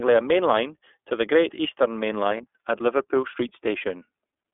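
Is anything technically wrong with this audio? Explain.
Yes, two things. The whole clip has gone through the iLBC codec. The band runs from about 250 Hz to 3.5 kHz, and the slightly rough, synthetic edge on the speech fits the 13.33 kbps mode with 30 ms frames, each coded on its own.

There's also a lost iLBC frame at 2.37 to 2.41 s. The decoder fills that gap by repeating the last pitch cycle with some noise, so you get a brief held, buzzy vowel, which points to one missing 30 ms frame. It recovers straight away.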